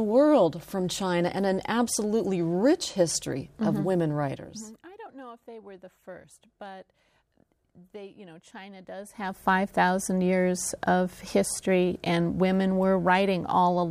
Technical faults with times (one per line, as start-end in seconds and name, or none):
none